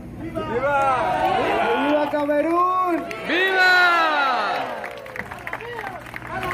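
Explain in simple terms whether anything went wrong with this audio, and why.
Nothing went wrong here: the audio comes through cleanly the whole way, with nothing that needs fixing.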